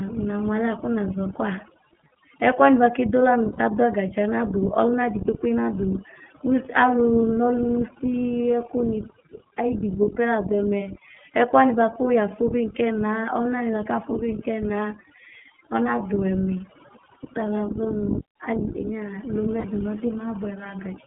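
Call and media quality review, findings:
Overdone noise removal, throughout the speech: noise floor pushed down and broken into twinkling specks; bands near the noise estimate gated off, so quiet voice detail goes with them.

iLBC codec, throughout: band limited to roughly 150 Hz to 3.4 kHz, rough synthetic edge plainly audible. Independently coded 20 ms frames, which fits iLBC's 15.2 kbps mode.

Lost iLBC frames at 3.52–3.60 s (60 ms), 17.14–17.16 s (20 ms) and 19.60–19.66 s (40 ms): held, buzzy vowel-like fill from the repeated last pitch cycle with noise. Recovery is immediate because the frames stand alone.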